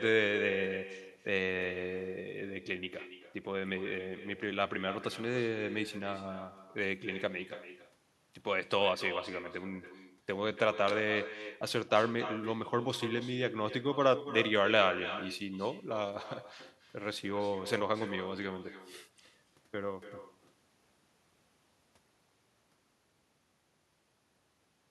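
Speech runs for the whole clip with an echo with no canceller: everything said comes back about a third of a second later as a quieter, thinner copy, about 12 dB below the direct voice. The far end is playing the call over a loudspeaker and its microphone feeds it straight back without cancellation. On a waveform each burst of speech trails a smaller delayed twin; on a spectrogram every syllable's pattern repeats faintly, shifted right.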